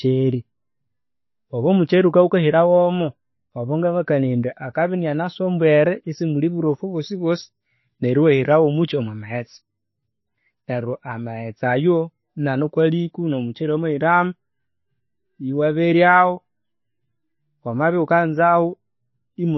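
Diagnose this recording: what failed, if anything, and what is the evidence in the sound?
The codec stage is the likely culprit: heavy MP3 compression throughout the speech, with damage that is plainly audible from start to finish. The bitrate is roughly 22 kbps. With so few bits, weak frequency lines are dropped and restored from frame to frame, leaving a watery, swirling texture and smeared consonant onsets.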